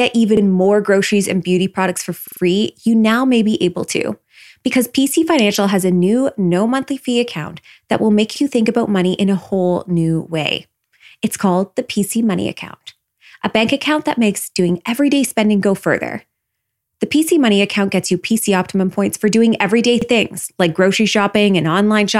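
At 0.37 s, 2.28 s, 8.36 s and 20.02 s, speech arrived late, so a repeated buffer replayed the last 46 ms block, three extra times at 2.28 s, causing a brief stutter. Waveforms show identical adjacent segments; spectrograms show copied slices split by hard vertical seams.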